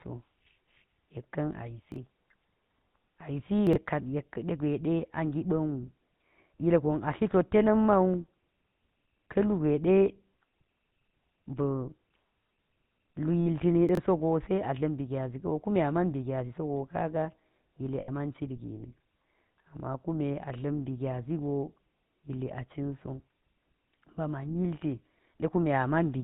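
The speech has a buzzy, gravelly roughness throughout, with nothing above 4 kHz. That is plainly audible GSM full-rate codec damage, and the sound fits the 13 kbps GSM full-rate coder, which models the vocal tract and drives it with a sparse pulse excitation. Brief garbled jumbles occur at 1.92 to 1.96 s, 3.67 to 3.76 s and 13.89 to 13.97 s. These are chunks out of order: audio blocks of about 21 ms played late, one block late in the first case and about three in the others, leaving hard joins. At 13.40 to 13.47 s and 18.00 to 18.09 s the sound hangs as a rough, metallic ring. These are lost GSM frames, lasting 60 ms and 80 ms, which fits roughly three and four 20 ms frames. Each was filled by repeating the last good frame's settings.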